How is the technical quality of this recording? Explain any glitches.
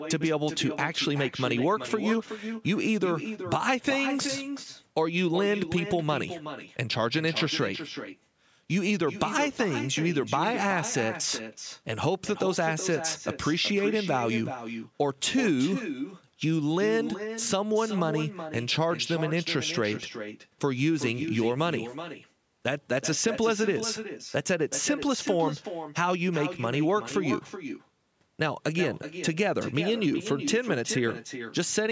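The recording has two clear faults: a constant echo under the speech and a short burst of crackle near the start.

Every phrase is shadowed by a quieter, thinner copy arriving roughly 400 ms later, sitting about 9 dB below the direct speech. This is echo with no canceller. The far end is playing the call through a loudspeaker, its microphone captures that playback, and nothing subtracts it before it is sent back. The talker's own voice returns after the network round trip, which is why the echo trails each syllable by that fixed gap.

From 4.19 to 4.29 s there is an irregular scratchy crackle, a rapid burst lasting about a tenth of a second. This is loose connector crackle. A worn or dirty contact in the cable or jack is briefly making and breaking as something moves, chopping the signal on and off. Any DC present on the line turns each break into an audible click, giving the crackling texture.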